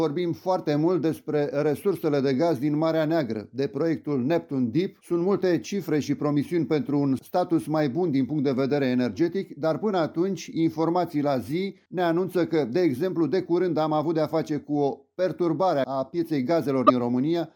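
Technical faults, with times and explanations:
16.84–16.90 s, damaged data in a compressed stream: a stretch of the encoded stream arrived corrupted, so the decoder misread the affected frames, lost sync and had to hunt for the next valid frame header, leaving a brief glitch of about 70 ms.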